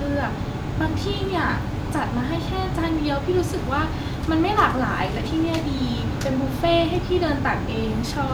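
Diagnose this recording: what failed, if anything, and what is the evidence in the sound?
At 5.60 s the speech jumps ahead a few milliseconds with no gap, most likely a dropped buffer (overrun) at the driver stage, where samples were overwritten before being read.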